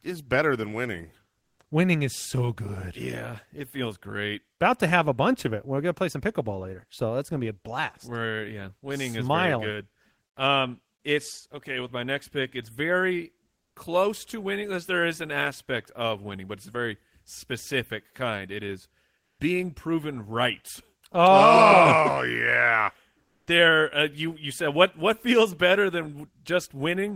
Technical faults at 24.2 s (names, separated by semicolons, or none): none